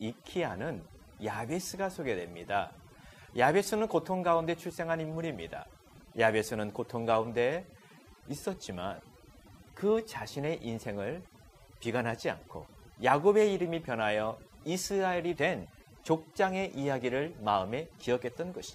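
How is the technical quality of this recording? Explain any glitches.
The recording suffers from overdone noise removal throughout. Frequency bands near the estimated noise level are cut hard, leaving near-silent gaps with twinkling specks, and quiet parts of the voice are cut along with them.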